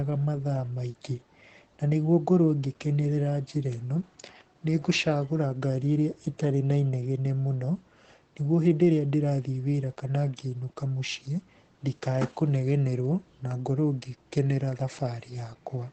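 From start to finish the speech carries Opus voice compression, and the damage is plainly audible. Nothing is left above about 8.6 kHz, so the voice sounds muffled and lacks air. The codec runs its SILK linear-prediction coder in wideband mode. It describes each short frame of speech with a coarse excitation signal. That coarseness makes the voice hoarse and slightly robotic. The sound points to a low bitrate, around 12 kbps.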